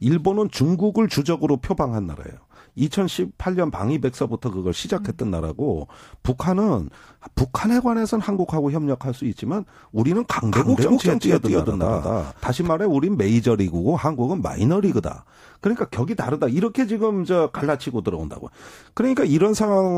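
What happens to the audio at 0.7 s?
Nothing goes wrong at 0.7 s; the speech there plays through intact, with no dropout, click or distortion.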